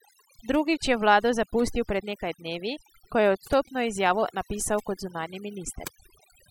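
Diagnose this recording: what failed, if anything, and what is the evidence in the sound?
Overdone noise removal at the call-processing stage runs throughout the speech: the background drops and breaks up into twinkling specks. A suppressor set too hard is gating individual bands near its noise estimate. A spectrogram shows isolated time-frequency dots in the gaps and eroded, patchy upper harmonics.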